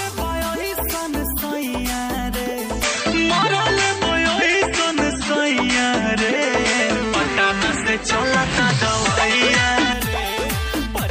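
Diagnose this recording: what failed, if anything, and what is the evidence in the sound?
The capture stage failed, at the device selection in the input path. From 2.83 s to 9.93 s the sound turns duller, with nothing above 8.4 kHz. The level shifts by around 5 dB and a faint new noise floor sits roughly 50 dB below the signal. Both changes are abrupt, with no gap at either boundary. This points to an input switched to a poorer device, likely a narrower-band microphone or headset profile, and then switched back.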